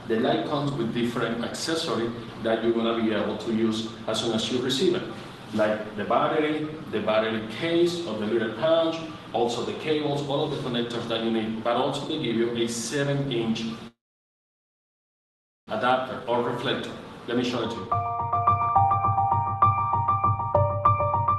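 At 13.87 s the sound stops and a gap lasting to 15.70 s follows, likely a call audio freeze: delayed packets left the jitter buffer empty. Nearly all of that 1.8 s, about 1.71 s, is silence, a flat line on the waveform and a blank band on the spectrogram. Nothing is lost; the audio resumes where it stopped, now later.

From 17.43 to 19.27 s a jitter buffer speed-up runs the audio at 110% speed, and again from 20.88 to 21.34 s at 107%. The receiver cut repeated pitch-period slices to shed excess delay, about a fifth of a second in the first stretch and a few hundredths in the second. The sound hurries at unchanged pitch; the spectrogram shows events compressed in time without harmonic shift.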